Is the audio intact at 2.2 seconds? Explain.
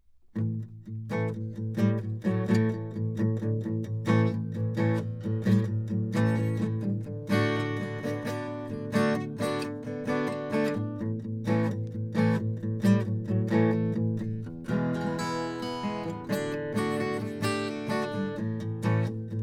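Yes, the music plays through cleanly at 2.2 seconds, with no dropout, click, distortion or other fault at that moment.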